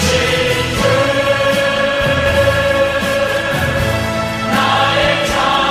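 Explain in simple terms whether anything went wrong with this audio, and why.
Nothing went wrong here: the signal holds steady the whole way, with no break, distortion or other technical trouble to be heard at any point.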